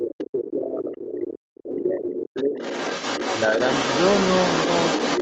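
From 0 to 0.99 s, and again from 1.44 to 2.58 s, the talker's speech sinks and breaks up, dropping by roughly 30 and then 40 dB. This is speech suppressed in double talk, likely from the echo canceller turning down both sides at once. Around 0.46 s, then 0.92 to 1.39 s, 1.99 to 2.17 s and from 2.56 s to the end, the other side's voice leaks through, faint at first and nearly as loud as the talker by the end, likely echo the canceller left in.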